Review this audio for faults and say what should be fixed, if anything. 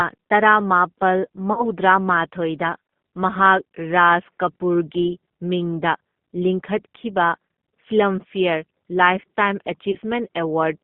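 The whole recording carries G.729 codec damage, and it's plainly audible. Everything sits in a narrow band of roughly 150 Hz to 3.6 kHz, with nothing above. The speech has that slightly rough, synthetic edge you get when the decoder rebuilds sound from a vocal tract filter, a pitch predictor and a few pulses per frame, which fits an 8 kbit/s G.729A link. To prevent it, route the call over a wideband codec such as G.722 or Opus.

There are two spots of VoIP packet loss concealed by the speech codec. The first runs from 1.53 to 1.67 s. About 40 ms went missing, which fits two lost 20 ms packets, and the decoder stretched its last pitch and filter into a fading sound that stays weak a little past the gap. The second, from 9.91 to 9.98 s, covers about 20 ms, consistent with one packet, and has the same smeared, decaying texture. To prevent it, fix the network path or add a jitter buffer with forward error correction.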